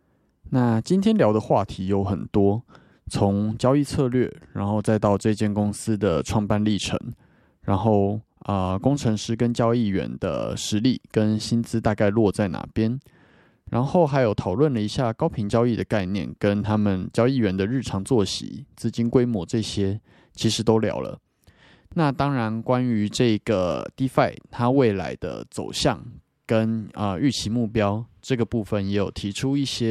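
Nothing stood out as a technical fault on listening through this speech recording.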